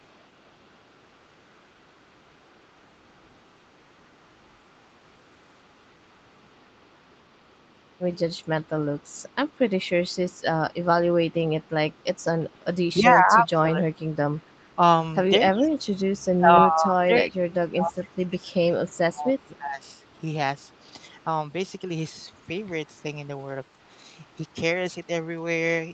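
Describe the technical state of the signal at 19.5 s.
At 19.5 s the speech is being pushed down in pieces. This is speech suppressed in double talk, running from 12.53 s to 19.82 s. It likely comes from an echo canceller that cannot separate the talker from loudspeaker echo while both sides speak, so it attenuates everything, by around 25 dB at the deepest.

An echo leak is also present, starting at 18.26 s and running to the end of the clip. A very faint copy of the voice returns about 306 ms late. The likely cause is a far-end canceller that failed to remove all the loudspeaker sound its microphone picked up.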